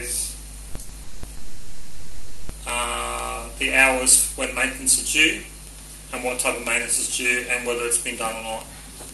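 Near the start the audio catches twice: a sound is held too long from 0.69 to 0.77 s (60 ms) and again from 0.81 to 0.91 s (80 ms), each with a slight buzzy smear before it moves on. These are short stalls from a late packet. The jitter buffer ran dry, so the receiver stretched the last sound until the packet turned up, then resumed at the same point without skipping anything. That adds 60 and 80 ms of delay.

Just after, the sound freezes into a fading buzzy continuation from 1.03 to 1.25 s (200 ms) and then for much longer, from 1.35 to 2.51 s (1.14 s). It never drops fully to silence, and afterwards it picks up where it stopped. This is call audio freeze, likely caused by packets held up in transit emptying the jitter buffer. The receiver filled the gaps with synthetic continuation rather than losing audio, pushing the playback delay out by more than a second.

At the end, from 8.19 to 9.07 s, the audio runs slightly hurried at unchanged pitch, about 6% fast. 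This is a jitter buffer speed-up. With too much audio queued after the earlier delays, the receiver trimmed tiny pitch-period slices, around 50 ms in total, to pull the delay back down.

All of this travels over an Opus call path whose band stops near 12 kHz, at a moderate bitrate of about 40 kbps.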